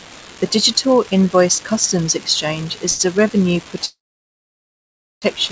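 A speech recording carried over a WebRTC call path, with the band stopping at 8 kHz as a G.722 wideband codec would leave it. An unreliable data bit runs through the whole clip: one marginal data line flips its bit in a random fraction of samples, and each flip lands as an identical spike. Together they form a steady crackle or fizz under the speech that stays audible in the pauses, which is how it differs from noise the codec would introduce. At 2.90 to 3.01 s, just before "a revenue", there is a short stall from a late packet. The jitter buffer emptied while waiting for it, so the receiver held the last sound for about 94 ms with a slight buzz or dip, then resumed from the same point. Nothing is lost, but the timing stretches by that amount. From 3.85 to 5.24 s, right after "is a revenue", the audio freezes in the manner of a call audio freeze, likely from packets held up in the network draining the jitter buffer. 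The final sound continues as a brief fading buzz or hiss and then gives way to about 1.27 s of silence. When the data returns, playback picks up where it stopped. The result is a 1.37 s gap inserted into the audio with no content missing.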